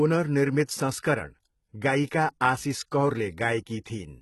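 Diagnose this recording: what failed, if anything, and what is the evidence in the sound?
The codec stage likely failed: HE-AAC compression, heavy enough to fit about 16 kbps, synthesises the treble from copied lower bands. Throughout, s sounds turn gritty and metallic, and nothing remains above 11.8 kHz.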